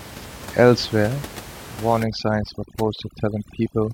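From 2.0 s to the end of the clip, overdone noise removal sets in. Before that, room noise sits about 16 dB below the speech. Here a noise reducer set too aggressively clamps every frequency band that comes close to its noise estimate, taking the softer parts of the voice with it. The background drops and breaks up, scattered with twinkling specks. A spectrogram shows a blank floor dotted with isolated bright flecks, and the waveform flattens between syllables.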